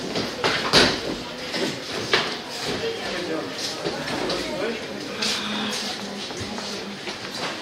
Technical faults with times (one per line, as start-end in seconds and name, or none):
none